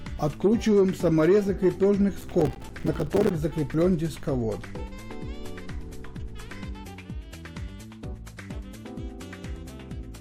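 From 2.21 s to about 3.31 s there is a burst of processor overload crackle. The processing could not complete its audio buffers on schedule, so over this stretch of just over a second it repeatedly missed deadlines, and each missed buffer came out as a short dropout of silence with abrupt edges. The gaps point to buffers of around 5 ms, with roughly fifty of them lost. Strung together, they produce a gritty, tearing crackle over the sound that ceases once the overload clears.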